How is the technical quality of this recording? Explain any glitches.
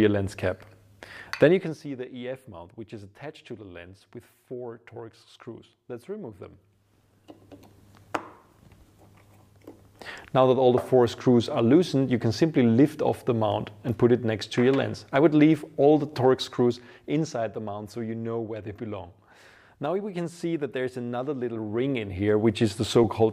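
No technical glitches can be heard anywhere in the recording. Where the level is brought down or up, it moves smoothly and steadily, the way a fader would.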